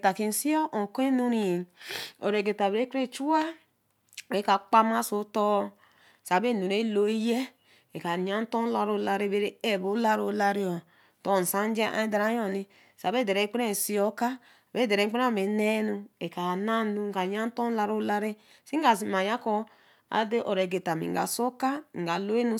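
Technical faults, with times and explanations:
Nothing technical stands out in this speech recording; there's no fault to point to anywhere along it.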